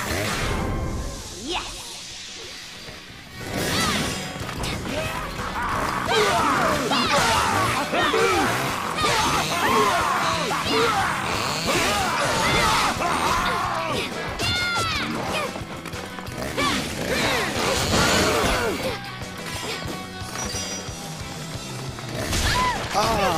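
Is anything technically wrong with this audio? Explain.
No, there is no technical fault in this audio.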